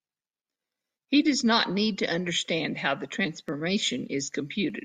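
A speech recording in which a regular click or tick cuts through the voice at an even pace, starting at 1.06 s and recurring every 1.21 s through to about 4.70 s, about four times in all. The steady spacing points to clock drift buffer slips as the likely cause. Two devices in the chain run on independent clocks that disagree by roughly 300 parts per million, so the buffer between them gradually drifts until a tiny block of samples, on the order of fifteen, is dropped or repeated, leaving a discontinuity heard as the tick.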